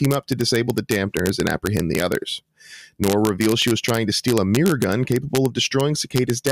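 A speech clip with integer overflow throughout. The loudest peaks only just reach the integer limit, and fewer than one sample in a thousand passes it. Those samples wrap to the opposite sign instead of being limited, producing cracks on the peaks.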